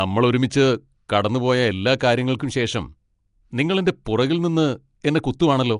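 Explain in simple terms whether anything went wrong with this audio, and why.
Yes: the speech was likely squeezed through Nellymoser compression, which discards fine detail, so it sounds rough, hissy and underwater throughout, with nothing above about 10.6 kHz.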